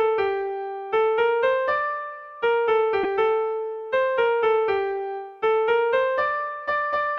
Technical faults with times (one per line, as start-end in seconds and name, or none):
3.03-3.05 lost LE Audio frames